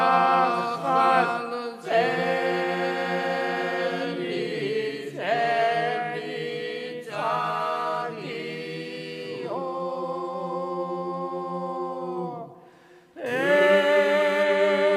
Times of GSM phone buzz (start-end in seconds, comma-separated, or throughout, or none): 13.26-14.44